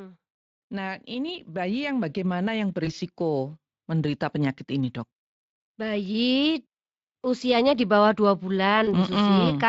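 From 0.69 s to 5.0 s the level climbs by about 8 dB. This is automatic gain rising. The gain control judged the input too quiet and turned itself up step by step. Voice and background noise swell together, since the gain acts on everything it receives. The change is gradual, spread over roughly four seconds, so it sounds like a slow swell rather than a jump.

At 2.85 s there is VoIP packet loss concealed by the speech codec. About 20 ms of audio went missing, which points to one lost packet. The decoder filled the gap by extrapolating from its last pitch and filter settings, and lowered the gain as it went. The sound stretches into a buzzy tone or a coloured noise that fades. Because each frame builds on the one before, the damage does not stop when data returns. It lasts until about 2.91 s.

A second concealment follows at 8.85 s, just after "usianya di bawah dua". Again about 20 ms was lost, which fits one missing packet. 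The same stretched, fading fill replaces the gap. Here the decoder takes longer to recover, and the disturbance runs to about 8.94 s. Throughout the clip, the Speex speech coding leaves only light codec damage of its own.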